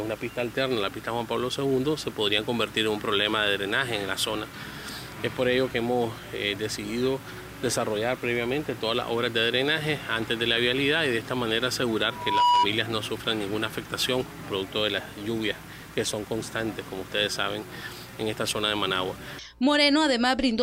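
At 12.09 s a loudspeaker feedback squeal begins: a single tone near 974 Hz swells over roughly a third of a second until it stands about 10 dB above the surrounding sound, then stops at 12.68 s. A microphone was picking up the loudspeaker it fed, and at that frequency the loop gain passed one, so the tone fed itself. Its self-sustaining build-up at one fixed pitch is what separates it from a steady hum or a resonant ring that decays.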